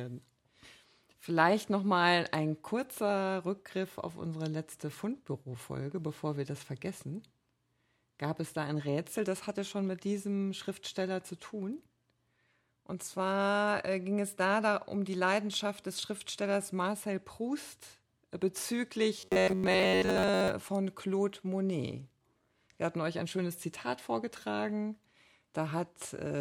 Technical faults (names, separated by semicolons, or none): robotic sound from repeated short buffers